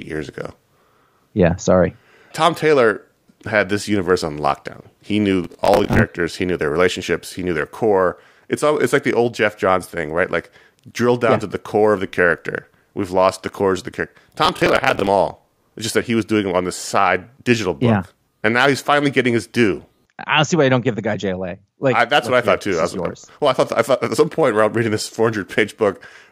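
Processor overload crackle occurs at 5.44 to 5.99 s and again at 14.45 to 15.07 s, just after "cores of the character". Buffers of around 10 ms miss their deadlines in quick succession, and stale audio is replayed with hard edges, producing a gritty, tearing crackle over the speech.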